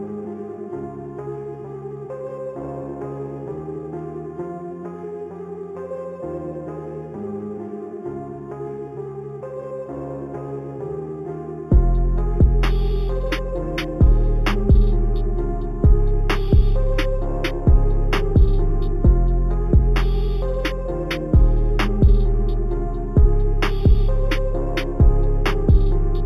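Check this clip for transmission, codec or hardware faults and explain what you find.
One fault runs through the whole clip: imaging from linear upsampling. The band above 4 kHz holds a faint mirrored copy of the content below it, which fits audio raised from an 8 kHz rate to 48 kHz by straight-line interpolation between samples. That interpolation is a poor anti-imaging filter. It dulls the top of the original band and leaves the first image, spanning 4 to 8 kHz, only about 35 dB down. This is heard as a light metallic shimmer over sibilant and bright sounds.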